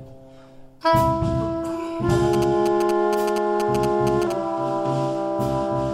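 From 2.33 to 4.32 s, GSM signalling bursts break in. A nearby 2G phone is exchanging short radio bursts with its network, and the audio circuit rectifies them. The result is a galloping dit-dit-dit of short 217 Hz buzzes, sitting somewhat below the main sound.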